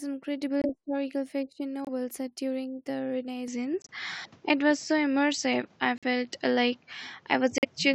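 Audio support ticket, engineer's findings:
Corrupt frame muted, 0.62–0.66 s, 1.85–1.89 s (just before "set during"), 3.82–3.91 s, 5.98–6.04 s, 7.58–7.65 s. Abrupt dropouts to silence, 40–90 ms each, consistent with one to four compressed frames. Decoder rejected bit-damaged frames; player substituted silence, timing preserved.

Input switched to a poorer device, 3.48 s onward. Sudden shift to a duller, band-limited tone, nothing above 7.9 kHz, no gap at the changeover. New noise floor roughly 35 dB down, and level moves by around 5 dB. Likely capture path changed to a narrower-band microphone mid-recording.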